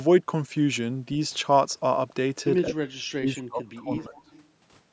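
Speech suppressed in double talk runs from 2.68 to 4.29 s. The speech dips sharply, at its deepest by roughly 30 dB, for about a second and a half in total. The likely cause is an echo canceller that could not tell the talker from loudspeaker echo while both sides spoke, so it turned everything down.

An echo leak follows at 4.15 to 4.41 s: a faint delayed copy of the speech, roughly 30 dB below it, arrives 207 ms late. It likely comes from a speakerphone whose echo canceller failed to remove all of the microphone pickup and sent that residue back.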